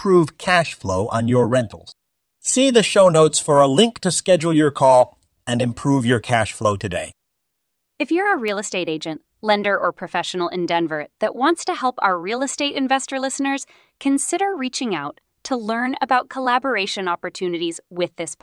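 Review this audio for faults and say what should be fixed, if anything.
At 8.48 s, between "you're a" and "estate agent lender or", there is a single sharp snap laid over the speech: an electrical switching spike. It is a brief, hard transient, peaking around -15 dBFS, well short of full scale. The likely cause is a nearby switch, motor or static discharge arcing, with the audio cabling picking up that burst of interference. To fix it, remove the click with spectral or transient repair. To prevent it, keep recording lines away from switched loads and use balanced, properly shielded cabling.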